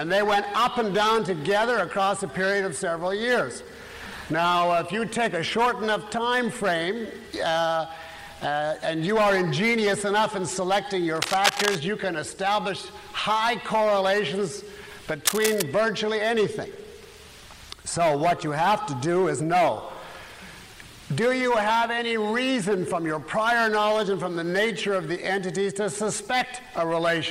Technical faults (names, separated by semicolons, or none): cable scratch noise